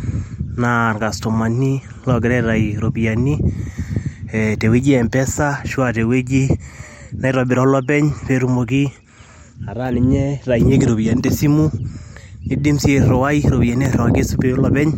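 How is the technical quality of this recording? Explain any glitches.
One glitch, right near the end: at 13.85 s there's a repeated buffer. A tiny slice of about 1.5 ms, fitting a 64-sample buffer, plays three times because new audio arrived late. It comes across as a brief click or buzz.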